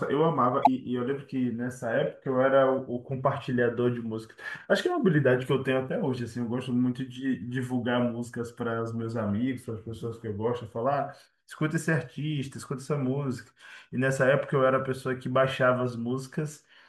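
At 0.62 s, a short burst of damaged data in a compressed stream lasts about 0.06 s, until 0.67 s. Corrupt bytes reach the decoder, which misreads or rejects the affected frames and loses sync until it finds the next valid frame header. The result is a brief chirp, squawk, click or short hole. When it comes out garbled, that separates it from a network dropout, where the audio simply vanishes or is patched with smooth concealment.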